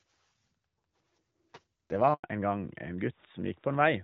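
A handover gap runs from 2.14 to 2.24 s: as the call switched networks, no speech frames got through for about 100 ms, so the speech fades out within a few tens of milliseconds and leaves a short hole where that stretch of speech is simply missing.

A fallback to narrowband follows at 2.24 s and lasts to the end. The light HD Voice character before the gap, consistent with AMR-WB near 12.65 kbit/s, gives way to a duller, rougher sound with nothing above 4 kHz, which fits AMR-NB at around 12.2 kbit/s.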